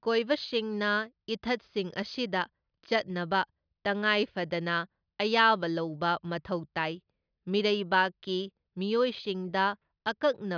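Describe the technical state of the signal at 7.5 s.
At 7.5 s the speech signal is intact, with no audible technical fault at that moment.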